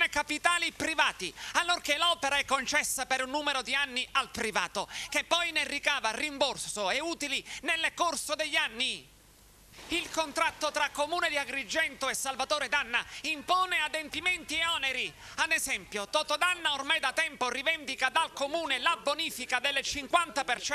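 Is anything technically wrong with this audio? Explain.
No, no technical faults.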